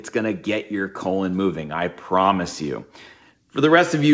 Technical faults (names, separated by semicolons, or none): automatic gain rising